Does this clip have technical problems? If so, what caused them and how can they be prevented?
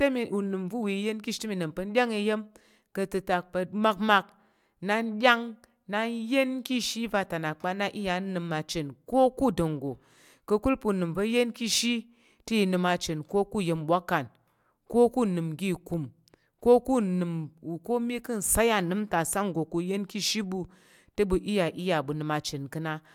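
No technical faults are audible.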